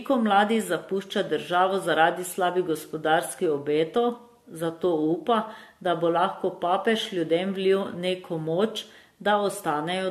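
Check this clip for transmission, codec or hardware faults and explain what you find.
The speech carries one codec fault that runs through the whole clip: generation loss, likely from the audio being decoded and re-encoded about four times with AAC-LC at a rate that fits 64 kbit/s. Each fresh pass quantises on a shifted frame grid, so errors stack. The voice sounds swirly, hollow and smeared beyond what one encode at that bitrate would give, and consonant onsets blur. A spectrogram shows patchy holes and blotchy upper bands, and the waveform shows softened transients.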